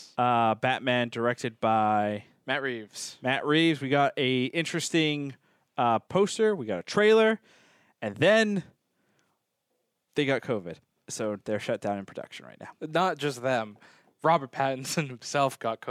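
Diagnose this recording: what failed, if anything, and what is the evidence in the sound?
Nothing failed: listening across the whole recording turns up no audible fault at any stage from capture to playback.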